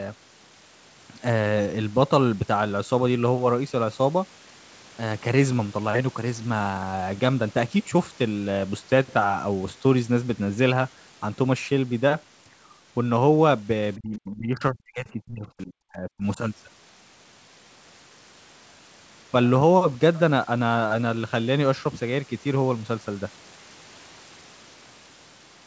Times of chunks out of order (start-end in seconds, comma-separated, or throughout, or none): none